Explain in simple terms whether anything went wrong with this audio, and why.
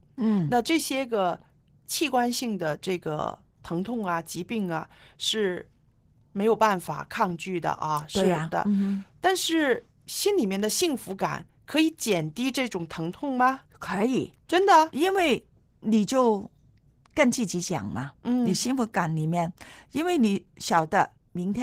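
Opus voice compression runs through the whole clip, plainly audible: squeezed hard to save data, the speech comes out muffled, slightly hoarse and a little robotic.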